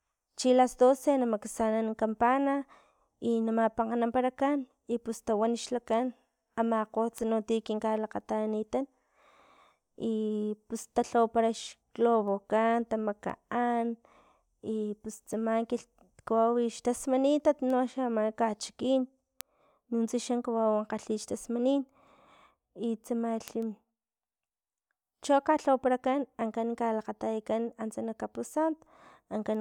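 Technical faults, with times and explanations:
1.07 to 29.58 s, word clock ticks: a brief tick about once a second, some thirty in all, running beneath the speech to the end. The receiving device runs on its own clock instead of locking to the sender's, and the two differ by something like 20 ppm. Each time they slip past each other a single sample is dropped or repeated. A spectrogram shows thin full-band vertical lines evenly spaced; the waveform shows tiny steps or kinks.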